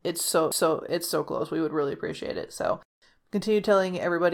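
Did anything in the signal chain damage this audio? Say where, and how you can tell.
Yes. A tick and a near-instant mute at 0.52 s, just before "it's so close", then the speech resumes elsewhere. This is a CD skip at playback: the laser jumped tracks.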